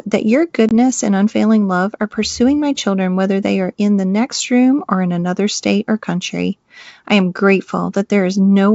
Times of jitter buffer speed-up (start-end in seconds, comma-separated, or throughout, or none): none